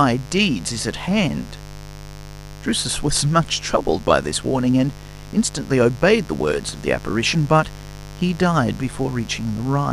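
A mains buzz runs under the speech throughout. Switching spikes from 50 Hz power leak in, adding harmonics into the kilohertz range. It sits fairly loud, a steady raspy drone.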